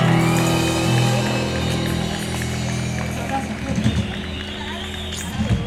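Everyday sounds, with no technical faults heard anywhere.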